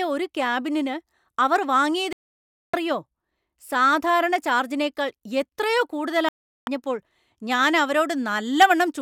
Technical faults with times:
2.13-2.74 digital broadcast dropout
6.29-6.68 digital broadcast dropout

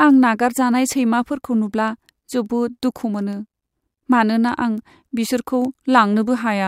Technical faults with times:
0.14-6.52 word clock ticks

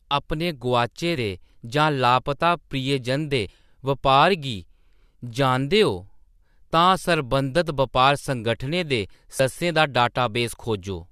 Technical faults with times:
1.15 damaged data in a compressed stream
3.48 damaged data in a compressed stream
9.39 damaged data in a compressed stream

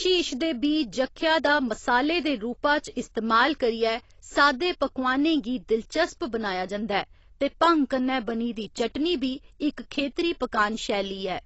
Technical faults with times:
0.00-11.45 AAC compression

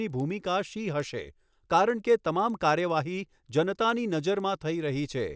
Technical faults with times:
0.00-5.35 resampler restarted on every block

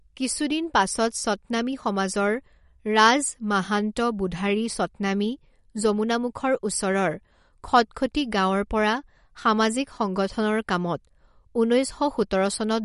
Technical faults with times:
0.00-12.84 MP3 compression

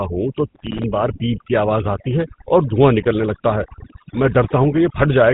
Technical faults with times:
0.00-5.33 overdone noise removal
0.00-5.33 GSM full-rate codec

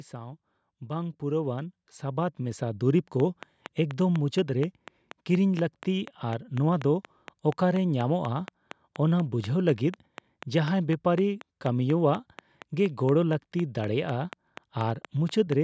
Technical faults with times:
0.12-2.90 automatic gain rising
3.20-15.53 train of clicks

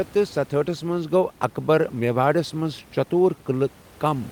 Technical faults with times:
0.00-4.32 clock drift between sender and receiver
0.01-4.11 repeated timing corrections

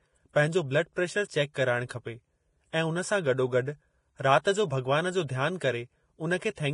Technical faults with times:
0.00-6.74 Vorbis compression

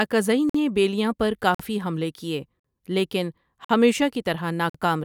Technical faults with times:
0.49-0.54 gap between chunks
1.54-1.59 gap between chunks
2.59-2.64 gap between chunks
3.64-3.69 gap between chunks
4.69-4.74 gap between chunks

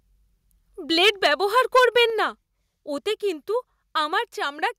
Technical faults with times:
1.01-1.27 microphone overload
1.09 microphone volume stepped down
1.57-2.03 microphone overload
2.10 microphone volume stepped down
3.12 microphone volume stepped down
4.14 microphone volume stepped down

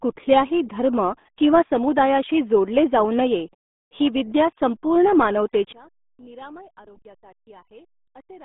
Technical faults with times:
0.00-8.45 RealAudio 14.4 codec
5.73-8.45 one channel inverted

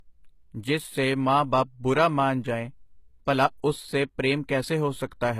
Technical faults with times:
0.00-5.39 low-bitrate audio saved at a high bitrate

